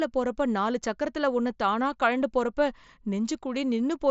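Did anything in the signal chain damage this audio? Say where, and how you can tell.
No, nothing in the chain damaged this speech.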